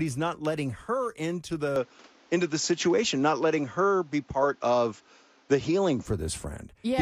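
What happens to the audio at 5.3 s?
The recording is still on what is likely a poorer input device at that moment. The switch comes right after "not letting her into" at 1.76 s, with no gap, and lasts until 6.06 s. The replacement path passes nothing above 7.6 kHz, so the speech loses its airy top and sounds duller and boxier. Its level shifts by about 5 dB, and a faint new noise floor sits roughly 35 dB below the speech.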